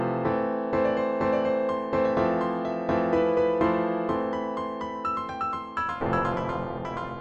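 From 5.77 s to the end at 7.20 s, the sound takes on overlap-add ripple. The audio has been split into windowed frames and summed back together with an overlap whose windows do not add up to a constant gain, so the level swings up and down once per frame, around 300 times a second, with a depth of about 60 dB. At that rate and depth it comes across as a metallic buzz with extra tones around each note.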